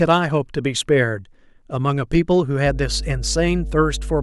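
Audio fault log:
2.66–4.22 s, mains hum: a steady low tone at 50 Hz appears partway through and runs to the end of the clip, sitting only a little below the speech in level. Power-line current is leaking into the signal path, most likely through a ground loop or a nearby transformer, so the 50 Hz supply frequency and its low harmonics ride under everything as a constant drone that does not follow the speech.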